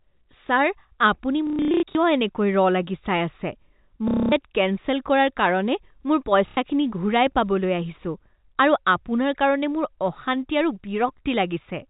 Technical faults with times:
1.47-1.95 packet loss with last packet repeated
4.08-4.32 packet loss with last packet repeated
6.48-6.57 packet loss with last packet repeated

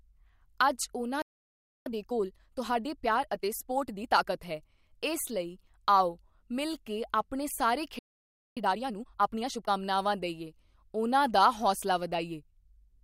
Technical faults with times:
1.22-1.86 playback stall
1.86-4.42 time-compressed catch-up
7.99-8.57 playback stall
8.57-9.71 time-compressed catch-up

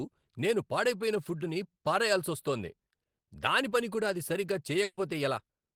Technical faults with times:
3.69-3.73 short concealed packet loss
4.83-4.99 burst of packet loss

